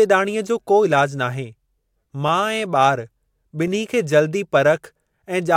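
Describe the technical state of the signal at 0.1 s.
At 0.1 s the signal is intact, with no audible fault at that moment.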